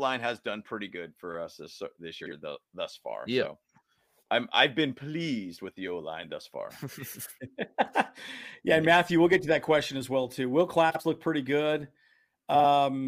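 Speech clip with frames out of order at 2.21–2.32 s, 10.90–11.00 s and 12.55–12.64 s. In each, two adjacent blocks of about 46 ms, which fits two-frame runs, play swapped, giving a brief garbled flutter and no lost time.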